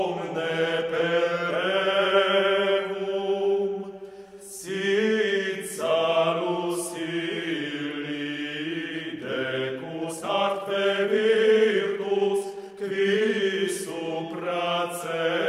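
From 9.94 to 13.58 s there's a time-stretched section, sped up 1.35 times with pitch held. It sounds rushed, likely software dropping short chunks.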